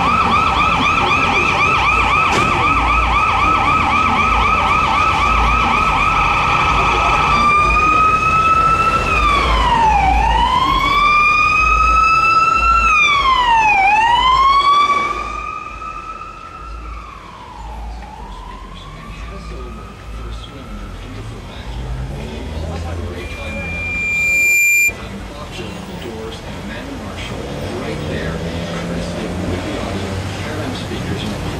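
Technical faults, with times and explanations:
23.2 to 24.94 s, loudspeaker feedback squeal: a pure tone at 2.4 kHz rises out of the audio over roughly a second and a half and ends up about 5 dB above the programme level before it stops. A microphone is hearing the loudspeaker it drives, and around 2.4 kHz the gain round that loop is above unity, so each pass reinforces the last and the tone keeps swelling until it is cut off at 24.94 s.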